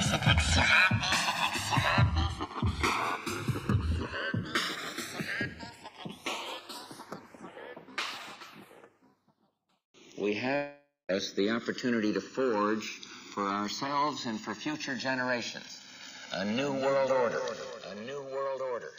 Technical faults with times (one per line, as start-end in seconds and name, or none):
0.00-18.99 channels drifting apart
10.55-11.11 long network dropout